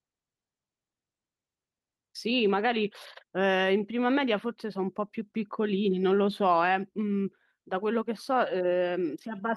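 No technical faults can be heard anywhere in this speech recording. There is no event in it that needs a time or a cause.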